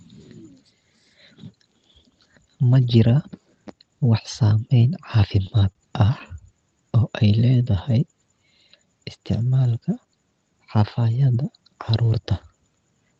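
Speech heard through a call path whose Opus-style coding is band-limited to about 8 kHz, which fits a 24 kbps setting, shows three jitter buffer faults. Between 5.21 and 6.29 s there are repeated stalls (stutter): seven brief hitches, the longest 29 ms, where the last sound is held and continued while the buffer waits for late packets, adding about 85 ms in all. Unlike packet loss, nothing is missing, so the sound drags and catches rather than skipping. From 6.97 to 7.84 s comes a jitter buffer slow-down: the receiver repeats single pitch periods many times to rebuild its reserve, stretching the passage by 79 ms so it runs at 92% speed. Because the extra time is spread through the sound instead of falling in separate hitches, it comes across as smoothly drawn out, with the pitch unchanged, rather than stuttering. Then, from 9.81 to 10.22 s, a jitter buffer speed-up does the reverse. With too much audio queued, the receiver trims short pitch-period pieces, removing roughly 70 ms so the speech runs at 113% speed and sounds hurried. 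The pitch stays where it was, which separates this from a sample-rate or playback-speed error. In that kind of error, faster sound would also rise in pitch.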